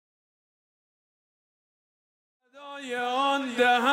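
Nothing stood out on listening; the smooth fade-in, from about 2.5 s to 3.84 s, rises evenly without a click or hard edge.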